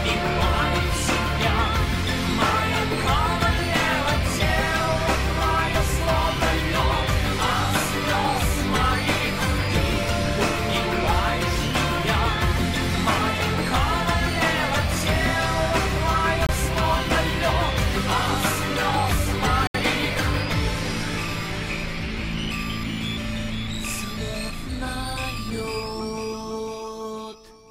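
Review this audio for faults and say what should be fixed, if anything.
Bluetooth stall, at 16.47 to 16.49 s and again at 19.67 to 19.75 s. The audio drops abruptly to silence for about 25 ms the first time and about 73 ms the second, then returns. The likely cause is radio interference delaying packets on the wireless link, so the headphones' small playback buffer emptied and output had to wait for retransmitted data. To prevent it, keep the phone and headphones close and clear of competing 2.4 GHz traffic, or use a wired connection for critical listening.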